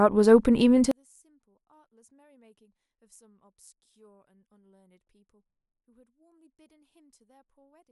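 From 0.91 s to the end, the speech collapses when heard in mono, dropping by about 39 dB to a faint remnant. The likely cause is one channel inverted: one stereo side has reversed polarity, so the centred voice cancels when the two sides are summed. On a mono waveform the envelope shrinks to near-flat at 0.91 s. A spectrogram shows the whole band dimming sharply.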